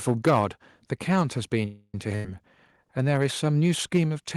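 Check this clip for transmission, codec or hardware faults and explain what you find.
Four faults are audible in this speech clip: a clipped opening, a small level drop, a stall, and a short dropout.

From 0.07 to 0.39 s the loudest peaks are flattened, giving the onset a harsh, crackly edge. This is microphone overload, most likely an input gain set too high, so the waveform tops run into the converter's ceiling. Peaks appear to overshoot that limit by about 8 dB, and around one sample in twenty is clipped.

At 0.29 s, inside that clipped stretch, the level steps down by about 2 dB all at once, speech and background together. This looks like the microphone volume stepped down, likely by the call software's gain control reacting to the overload and lowering the device input in a single move. The step is small, so it registers as a slight drop in presence more than a gap.

From 1.65 to 1.95 s the sound stops advancing. 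The last sound is stretched into a fading buzz or hiss, including about 40 ms of silence, and then speech resumes exactly where it left off. This is a call audio freeze, likely caused by delayed packets draining the jitter buffer. About 282 ms of filler was inserted and nothing was lost, so everything after it runs roughly 282 ms late.

From 2.16 to 2.25 s there is a burst of packet loss. Roughly 88 ms of synthetic continuation replaces the real audio: the preceding sound is held and faded as a buzz or hiss. Speech then picks up further along. About 90 ms of the original was dropped, so unlike the freeze, a short piece of content is missing here.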